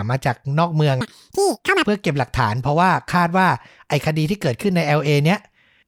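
From 1.01 s to 1.86 s the speech plays at double speed and a full octave (12 semitones) higher. The audio was read two samples at a time, with pairs of samples consumed as single frames, as if the data held two channels or twice-wide samples.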